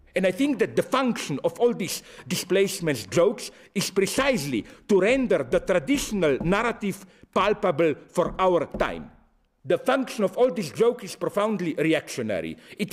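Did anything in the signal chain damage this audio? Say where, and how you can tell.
No, nothing along the signal chain can be heard to have damaged this audio. Listening through it, no stage from capture to playback leaves an audible mark on the sound.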